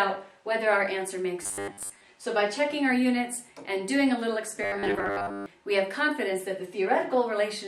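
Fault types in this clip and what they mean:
Robotic sound from repeated short buffers: from 1.43 to 2.05 s and from 4.63 to 5.46 s the sound becomes a rigid, metallic buzz locked at 100 Hz. That fits a 10 ms slice being replayed again and again, likely because new audio arrived too seldom, so most of the real material there was skipped. A spectrogram shows evenly spaced flat harmonics every 100 Hz, and the waveform shows one short shape repeating every 10 ms.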